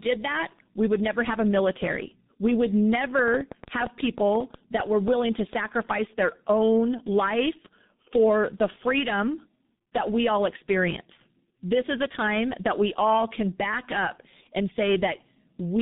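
From start to finish the speech carries tandem speech coding: it has passed through three speech codecs in a row, each re-encoding the previous one's already damaged output. The chain points to CVSD and G.711 A-law links ending in a low-rate coder that fits G.723.1 at 6.3 kbit/s. Errors compound at each stage, so the voice sounds rough, muffled and warbly, with nothing present above 3.8 kHz.

From 3.19 to 5.54 s a train of clicks sits over the audio: around fifteen similar sharp pulses at about 6.8 per second, spaced unevenly and peaking roughly 10 dB above the signal. They are heard as irregular ticking or popping, in the gaps as well as over the speech. A source injecting repeated pulses, such as nearby equipment interference or a faulty connection, is the likely cause.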